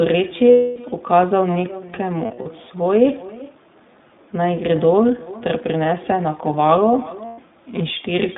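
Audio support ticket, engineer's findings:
Echo with no canceller: faint, thinner repeat of the talker's speech about 400 ms later, about 19 dB down. No AEC at far end. Spectrogram shows a faint delayed ghost of each syllable.

iLBC codec: rough, slightly synthetic narrowband sound throughout, band 150 Hz to 3.7 kHz. Fits iLBC 20 ms mode at 15.2 kbps. Spectrogram shows nothing above 3.7 kHz.

Lost iLBC frames: held, buzzy vowel-like fill at 0.51–0.78 s and 7.26–7.40 s, plus short scattered dropouts at 2.26–2.48 s, the longest about 40 ms. Decoder concealment repeats the last pitch cycle with noise, and speech recovers immediately after. Spectrogram shows flat, smeared harmonics at these times.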